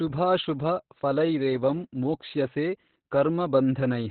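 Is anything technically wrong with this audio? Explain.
Yes. Throughout, the speech shows Opus voice compression at a very low rate, which fits about 8 kbps in SILK narrowband mode: linear-prediction coding with a coarsely quantised excitation and nothing above 4.4 kHz. The voice sounds muffled, hoarse and slightly robotic.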